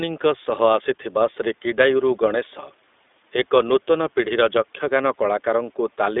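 From start to finish the speech carries iLBC codec damage, plainly audible: the band is confined to roughly 250 Hz to 3.6 kHz, and each short frame, consistent with 20 ms framing, is coded independently, giving a rough, slightly synthetic texture that fits its 15.2 kbps mode.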